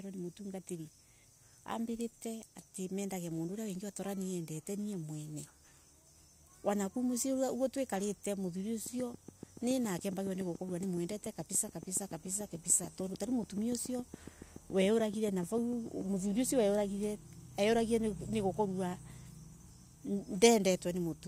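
A speech recording with a train of clicks from 8.86 to 16.02 s, starting just after "oguoo twikarite": around fifty near-identical ticks at a regular 7 per second, peaking about 5 dB above the speech and audible in pauses too. That steady, repeated shape distinguishes it from random crackle, and likely points to interference or a faulty connection or power supply.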